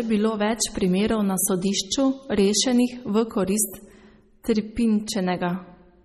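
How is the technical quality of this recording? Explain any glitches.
The recording has audible coding damage throughout and one brief glitch.

MP3 compression, likely at a low bitrate around 32 kbps, throws away weak frequency detail and cuts everything above 15 kHz. The speech sounds watery and swirly, with metallic chirps on s sounds and softened consonant attacks.

Pre-echo at 4.43 to 4.45 s comes from the codec spreading its quantisation noise over a whole block, so noise meant for a sharp attack spills into the quiet moment before it. The result is a short hiss of about 20 ms just ahead of the attack, which itself sounds smeared.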